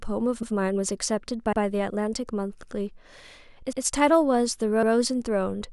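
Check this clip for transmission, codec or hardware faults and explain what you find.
There is one fault, overlapping chunks, occurring five times at 0.43, 1.53, 2.63, 3.73 and 4.83 s. The audio was handled in 1-second blocks, each starting 100 ms before the previous one finished, so about 100 ms of speech repeats at every join. The result is a regular stutter recurring every 1.1 s. On a waveform, a 100 ms stretch appears twice in a row. On a spectrogram, that short pattern is duplicated, often with a thin vertical line at the discontinuity.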